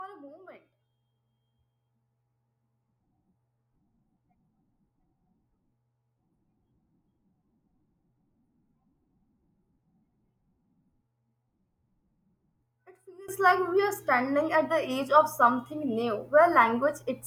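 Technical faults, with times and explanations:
13.28 s to the end, sudden gain jump: the speech and its background noise leap up together by about 22 dB in a single step and stay there, with no fade. This is likely a digital gain change applied between two adjacent samples without any ramp.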